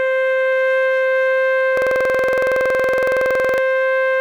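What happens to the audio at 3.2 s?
At 3.2 s the music is stuck in a rapid, rattling stutter: one 46 ms fragment repeats at about 21.5 Hz, roughly 39 times in all, from 1.77 s to 3.58 s. This is a system hang loop. The computer or its audio driver stopped supplying new samples, and the sound hardware kept replaying the same ring buffer. The loop length fits a 2048-sample buffer.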